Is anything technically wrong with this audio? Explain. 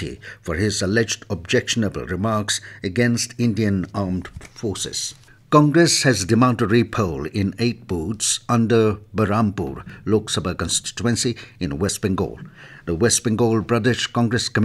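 Yes, there's an overlap between stream segments. Tiny skips land at 7.90, 9.90 and 11.89 s, about 2 s apart, where overlapping segment timestamps get trimmed, chopping out sound and making the waveform jump.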